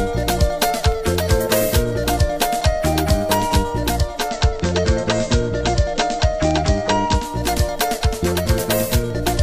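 At 3.95 s the audio blends from digital to analogue FM over about 441 ms. The receiver has lost its digital signal and cross-fades to the station's FM broadcast, returning to digital at 7.50 s. During that stretch, hiss sits roughly 35 dB below the signal and the level shifts by about 1 dB. The added hiss and the smooth cross-fade set it apart from a plain codec bandwidth drop.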